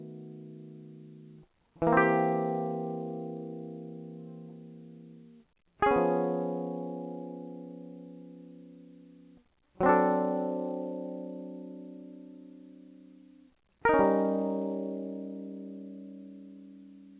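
Nothing stood out on listening to this music, which comes over a call path whose codec carries nothing above 4 kHz.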